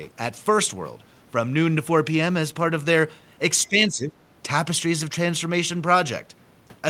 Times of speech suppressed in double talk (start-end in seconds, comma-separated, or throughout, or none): 3.69-4.16